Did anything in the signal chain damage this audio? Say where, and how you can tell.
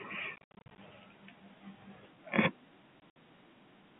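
Yes, at the network stage: packet loss filled with silence. Between 0.36 and 0.78 s about 260 ms drops out in holes up to 70 ms long, and again from 3.01 to 3.12 s (80 ms, longest 60 ms). The hole lengths fit 10 ms packets. The receiver played silence in their place, so each gap has hard edges against the telephone-band speech.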